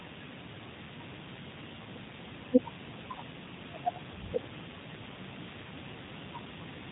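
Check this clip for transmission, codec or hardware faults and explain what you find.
One codec fault runs through the whole clip: the speech has passed through G.729, and the damage is plainly audible. Nothing reaches above about 3.8 kHz, so sibilants and consonant detail are missing. The codec rebuilds each short frame from a vocal-tract filter model, a pitch predictor and a few pulses rather than the true waveform, which gives the voice a slightly rough, synthetic quality. The sound fits an 8 kbit/s VoIP link.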